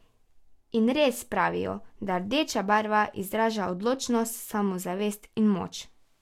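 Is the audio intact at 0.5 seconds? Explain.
Yes, the speech at 0.5 seconds is intact, with no dropout, click, distortion or other fault at that point.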